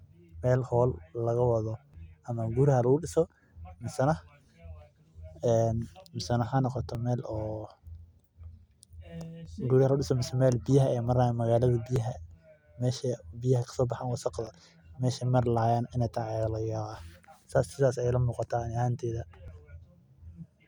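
The speech was handled in chunks of 2.5 s, and each new chunk began about 6.5 ms before the previous one finished. This overlapping chunks fault replays that sliver at every join: 1.94, 4.44, 6.95, 9.46, 11.96, 14.47, 16.98 and 19.48 s. Each doubled fragment is too short to register as an echo and lands as a small click or tick, recurring with a steady 2.5 s beat through the speech.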